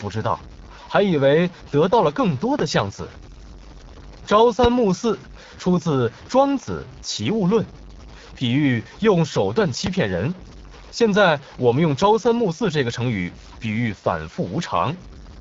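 From start to finish, the speech carries a gritty, grainy distortion that rises and falls with the signal itself, sitting roughly 25 dB below it. The likely cause is low bit depth without dither, with samples truncated to about 7 bits. Unlike a steady hiss, which stays put regardless of level, this error is tied to the waveform, so it roughens quiet syllables most and crackles or drops out in near-silent gaps instead of filling them with even noise.

Layered over this, also for the whole clip, is the sound of the AMR wideband (HD Voice) codec at a low rate, which fits something near 8.85 kbit/s. Damage is plainly audible: the speech takes on a raspy, buzzy roughness because the codec rebuilds it from a pulse-excited vocal tract model with too few bits to follow the real waveform closely. The band stops at about 7.4 kHz, and the top of that range is synthetic noise rather than true detail. 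That model-driven rasp sets it apart from the quantisation grit, which follows the signal sample by sample.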